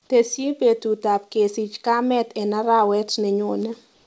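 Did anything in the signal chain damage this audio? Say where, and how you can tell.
Yes. The call-processing stage applied an automatic gain rise from 0.09 s to 3.78 s. The gain control judged the input too quiet and raised it slowly, by about 7 dB across that span. Because the change is applied to the whole signal, voice and background get louder together. On a waveform the envelope widens steadily from left to right. On a spectrogram the noise floor between phrases brightens along with the speech, which is how you tell it from a talker simply getting louder.

The final stretch, from 3.94 s to 4.07 s, lasts about 131 ms. There the real background gives way to a smooth, featureless hiss about 43 dB below the loud parts, with a level step of about 2 dB. This is likely comfort noise in place of the background, generated at the receiver while the sender's transmission was paused. On a spectrogram the textured floor turns into a flat, uniform wash. 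The waveform shows a steady, patternless band. The content still stops at 8 kHz, as expected on this call path.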